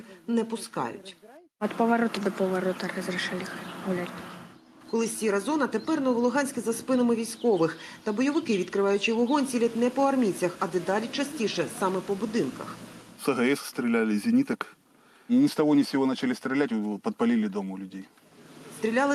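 No dropouts, clicks, distortion or timing errors turn up anywhere in the recording.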